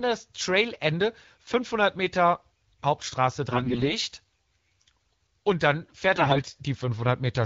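From 3.51 to 3.94 s, and again from 6.15 to 6.44 s, the speech turns hoarse, scratchy and gargly. These are AMR bit errors: heavily corrupted frames, with roughly one bit in seven flipped, still decoded because the protected core bits survived. Misplaced excitation pulses and wrong fine pitch, gain and spectral values produce the rasp. Unlike packet loss, there are no gaps or muting, and pitch and loudness hold steady inside the wideband AMR-WB sound.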